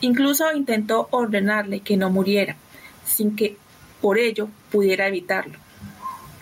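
The speech recording has no audible technical faults anywhere in the signal.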